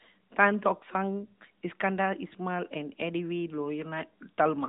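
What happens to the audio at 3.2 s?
Nothing goes wrong at 3.2 s: the speech continues intact through that moment, carried by the narrowband mobile codec at 12.2 kb/s with only the light damage that codec brings throughout.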